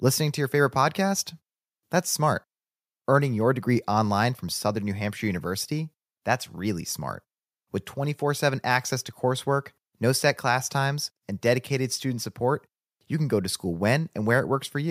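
No technical faults are audible in this speech recording.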